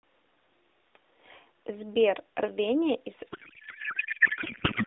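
From 3.32 s to 4.86 s there is a codec payload misread: the sender packed the AMR frames in octet-aligned form, but the receiver unpacked them as bandwidth-efficient. Each frame still decodes, but with its fields shifted, so the decoder builds sound from the wrong parameters. The speech gives way to a garbled, warbling noise that barely tracks it, with its own loudness, heard through the narrow telephone band of the AMR narrowband mobile codec, whose light coding grain fits about 12.2 kbps.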